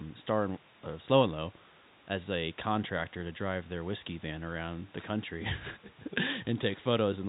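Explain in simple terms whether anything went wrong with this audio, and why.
Nothing went wrong that a listener would notice: the speech sounds the way an ordinary telephone call normally sounds, with a little quiet room noise well below it.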